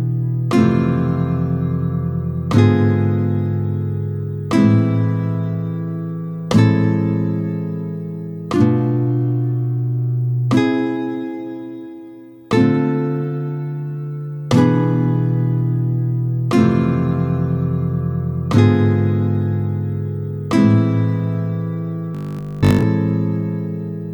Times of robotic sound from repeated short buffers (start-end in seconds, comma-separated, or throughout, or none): 22.15-22.83